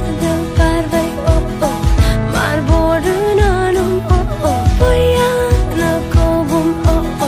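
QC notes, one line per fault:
5.68–5.73 s, damaged data in a compressed stream: a brief fault lasting about 44 ms. The decoder misreads corrupt frames and resyncs at the next header. Unlike a plain dropout, it comes from misread compressed frames rather than missing signal.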